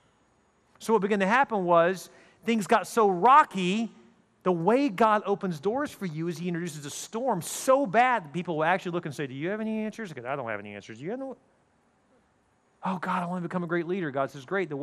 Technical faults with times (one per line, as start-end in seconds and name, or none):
0.00-14.83 MP2 compression